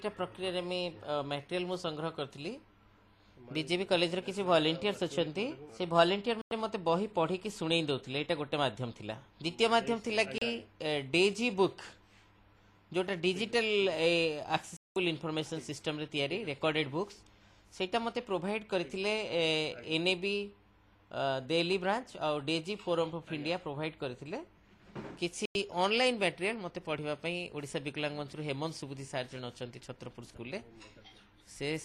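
At 6.42 to 6.52 s, 10.38 to 10.42 s, 14.77 to 14.96 s and 25.46 to 25.56 s the sound just drops out and comes back: a digital broadcast dropout. The receiver stopped getting clean frames and muted until good ones arrived, so whatever was sent in those gaps is gone. The holes run 96, 32, 192 and 96 ms, neat multiples of 32 ms, which fits whole frames being thrown away.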